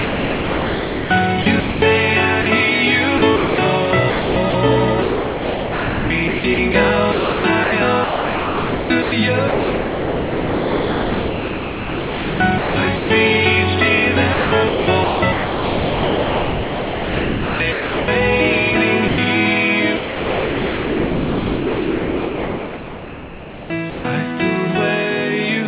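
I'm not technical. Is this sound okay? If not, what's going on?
No. The sound keeps breaking up. From 0 to 1.82 s, 3.18 to 3.58 s, 4.1 to 13.1 s, 14.34 to 18.08 s, and 19.96 to 24.04 s, it is sound chopped by the voice detector. Quiet parts repeatedly cut to an artificial hiss, so the audio stutters, most likely because the sender's voice detector kept switching off.

Twice the sound briefly vanishes into steady hiss: a 40 ms gap at 2.42 s and a 100 ms gap from 19.08 to 19.18 s. This is sound dropped by the voice detector. The sender likely mistook that moment for background noise and stopped sending.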